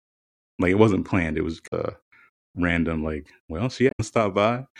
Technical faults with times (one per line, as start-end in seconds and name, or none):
1.63-1.72 damaged data in a compressed stream
3.88-4.00 damaged data in a compressed stream